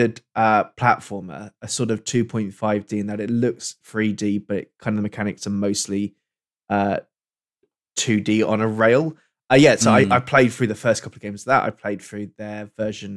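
No dropouts, glitches, distortion or other technical faults can be heard anywhere in the recording.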